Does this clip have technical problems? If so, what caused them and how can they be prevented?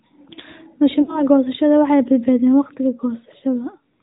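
Yes. The speech went through the AMR narrowband mobile codec at 10.2 kbps. Nothing above 4 kHz survives, and the voice sounds buzzy and synthetic. A wideband codec or a higher bitrate would prevent this.

There are also lost AMR speech frames. From 1.02 to 1.27 s, about 60 ms of audio is missing, which fits three dropped frames. The decoder stretches the last sound and fades it out. At 3.40 to 3.44 s, a single lost frame causes a short dip. A stronger radio link or better error protection would prevent these losses.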